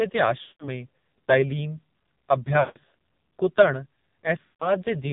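Throughout, the speech passes through the AMR narrowband mobile codec. Nothing above 4 kHz survives, and the heavy buzzy, synthetic quality points to one of the low AMR-NB modes, near 5.9 kbps, where the vocal-tract model gets very few pulses per frame.

Lost AMR speech frames occur at 0.42–0.69 s, 2.60–2.78 s and 4.44–4.71 s. Each run of failed frames makes the decoder repeat the last good pitch and filter settings with falling gain, so the sound smears, then fades to near silence before returning briefly weak or rough.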